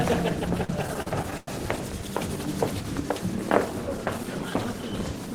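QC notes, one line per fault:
0.57–1.48 s, repeated stalls (stutter): Nine short breaks in under a second. Packets arrived late or too slowly, so the jitter buffer kept running dry. Each time, the receiver held on to the last bit of sound and stretched it until new data came. The longest wait was 98 ms and faded out. About 240 ms was filled this way, roughly a quarter of the span. Nothing is lost, but the audio drags and stutters.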